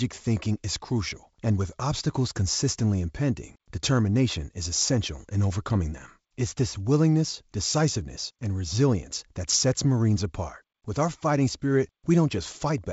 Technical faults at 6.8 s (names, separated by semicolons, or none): none